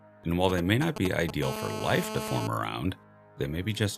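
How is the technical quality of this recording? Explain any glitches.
The recording is marred by radio interference from a 2G mobile phone, heard in two distinct episodes.

From 0.49 s to 1.31 s there are GSM signalling bursts. A nearby handset was exchanging short control transmissions with the network, and the audio circuitry rectified those radio pulses into the signal path. Because the phone sends only brief clusters of bursts at a 217 Hz frame rate, this comes through as a galloping dit-dit-dit of short 217 Hz buzzes, loud enough to sit only a few decibels below the sound.

From 1.43 s to 2.47 s the interference becomes a GSM phone buzz. The phone had moved into an active call, so it was transmitting continuously at 217 bursts per second, and the circuit demodulated each pulse. The result is a steady, hard, raspy 217 Hz buzz packed with harmonics, at about 7 dB below the sound and unrelated to anything in it, lasting the full second.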